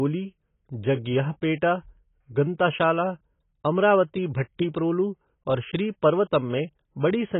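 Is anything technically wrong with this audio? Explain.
Yes. Throughout the speech, nothing sounds above 3.8 kHz, and the remainder is dull, smeared and warbly, with fizzy sibilants. This is likely heavy AAC compression. At what sounds like about 16 kbps, the encoder lowers its cut-off and starves bands of bits. A plain low-pass filter would sound dull but clean, without this warble.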